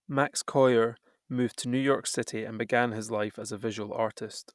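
No audible technical faults.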